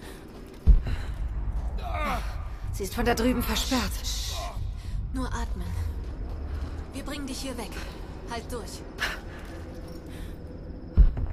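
No technical faults can be heard anywhere in this audio, and the signal holds steady in level and continuity throughout.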